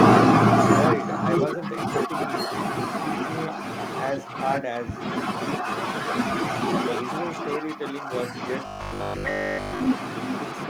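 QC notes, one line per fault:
Throughout: echo with no canceller. Every phrase returns about 9 dB quieter, roughly 0.4 s later, thin, as the far loudspeaker feeds its microphone.
8.66–9.88 s: robotic sound from repeated short buffers. Speech becomes a rigid metallic 50 Hz buzz, likely one 20 ms chunk repeating while most real audio is skipped.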